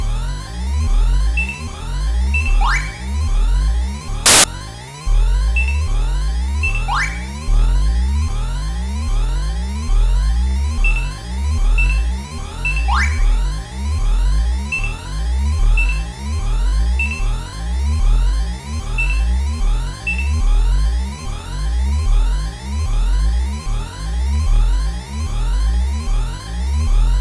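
At 4.26 s a burst of static cuts in and stops at 4.44 s. This is file tags played as audio. An embedded cover picture was read as samples. Its compressed data sounds like very loud white noise for 180 ms, with hard edges at both ends.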